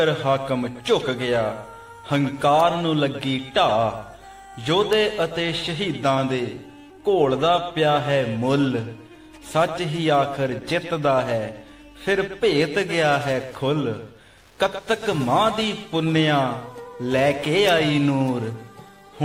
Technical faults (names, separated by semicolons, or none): Wi-Fi interference